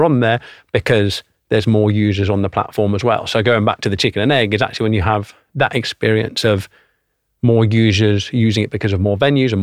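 No technical faults are audible.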